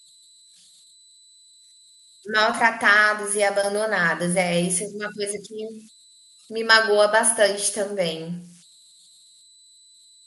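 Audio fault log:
throughout: converter idle tones. A faint whistle around 4 kHz, about 32 dB below the speech, sits in the pauses and grains the quiet passages because an undithered delta-sigma converter falls into repeating bit patterns at low input. Unlike mains hum, it is high-pitched rather than a low buzz.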